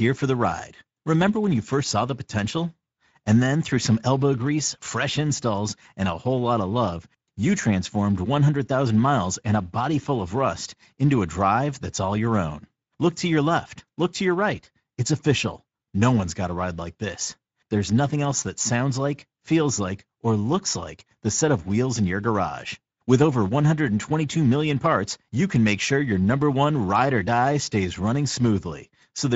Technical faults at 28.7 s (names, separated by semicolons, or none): Speex codec